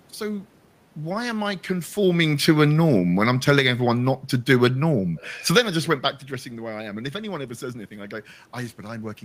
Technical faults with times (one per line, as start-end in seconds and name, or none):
1.97-5.71 automatic gain falling